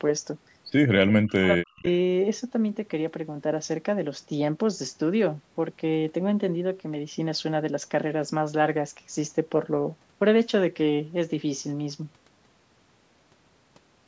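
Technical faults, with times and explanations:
1.02–1.86 s, speech suppressed in double talk: the speech drops sharply, by roughly 40 dB at its deepest, across most of this span. This is likely an echo canceller mistaking the near talker for loudspeaker echo while both sides spoke.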